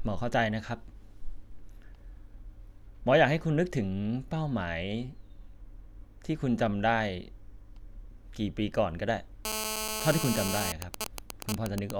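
From 9.45 to 10.72 s, GSM phone buzz cuts across the speech: a hard, raspy tone at 217 Hz with dense harmonics, about 2 dB below the speech level. A nearby 2G handset in a call transmits steady bursts that the audio circuitry rectifies into sound.

From 10.82 to 11.91 s a nearby phone, in a call but with its user silent, sends only sparse groups of bursts. These GSM signalling bursts come through as even ticks with a longer 217 Hz buzz twice a second, roughly as loud as the speech.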